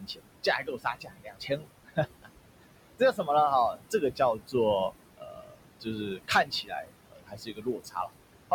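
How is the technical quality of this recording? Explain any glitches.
The recording is marred by heavy noise suppression, pulling the room noise down by about 21 dB and at times taking the speech with it.

Noise suppressor artifacts run throughout: the room noise, which sits only about 11 dB below the speech, is cut hard in every band judged steady, so the residue sinks between phrases and rises under the voice. Unlike plain room noise, it pumps with the speech.

Speech cut by the noise suppressor occurs at 0.0–0.26, 0.63–1.67, 2.17–2.29, 2.99–3.28, 3.74–4.54, 5.18–6.9 and 7.07–8.12 s, with drops of about 15 to 22 dB. Quiet speech was mistaken for noise and turned down, so endings and soft sounds go faint or swallowed, worst in the last two stretches, where roughly a second each is affected, not just gated pauses.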